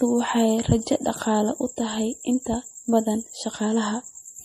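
MP3 compression, likely the cause, runs through the whole recording: nothing remains above 15.2 kHz, and the speech carries a plainly audible watery swirl where weak frequency lines drop in and out between frames, which fits a starved bitrate of around 40 kbps.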